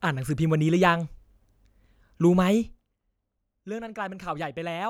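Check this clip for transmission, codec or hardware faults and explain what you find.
One fault turns up: zipper noise from 2.61 to 2.97 s. A gain drop of about 15 dB is applied unsmoothed in roughly a hundred steps per second, so fine ticking rides on the speech.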